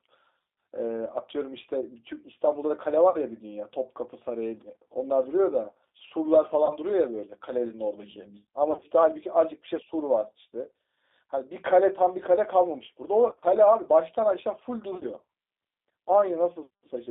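Speech runs through a G.729 codec at 8 kbit/s for the whole clip, and the coding damage is plainly audible. The band sits between roughly 250 Hz and 3.7 kHz, so the low body and everything above the upper edge are missing. The codec rebuilds each 10 ms frame from a vocal-tract filter, a pitch predictor and a sparse set of pulses, which gives the voice a rough, slightly synthetic texture. Five spots of VoIP packet loss concealed by the speech codec break in at 3.10–3.17 s, 6.66–6.77 s, 8.72–8.86 s, 13.28–13.44 s and 14.93–15.04 s. At each one the decoder carries on from its last pitch and filter state while turning the gain down. The sound there smears into a fading buzz or coloured noise and stays weak or distorted briefly after real packets resume. The first two gaps sound like a single burst, consistent with about 40 ms and 30 ms of missing audio. The last three sound choppier, as if short losses of 20–30 ms were scattered over 80–140 ms. 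That pattern fits roughly 50–90 ms lost in each of those stretches.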